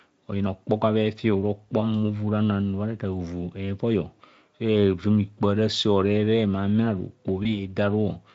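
At 7.43 s the speech briefly smears into a fading buzz or coloured noise, weak until 7.73 s: VoIP packet loss concealed by the speech codec, extrapolating across a 20 ms gap, fitting one lost Speex frame.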